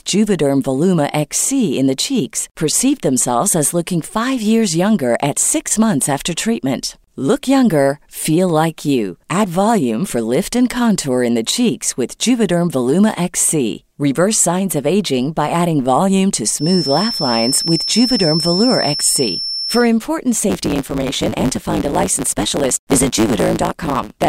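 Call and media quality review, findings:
Feedback whistle, 16.54–19.90 s: thin steady 5.3 kHz tone a few dB under the speech, level wavering; likely speaker-to-mic loop at threshold. Spectrogram: persistent horizontal line.

Block size mismatch (truncated), 20.49 s to end: 109 Hz buzz, speech running 1.16x fast at near-normal pitch; block tails dropped, which fits 512-sample writes. Waveform: regular discontinuities.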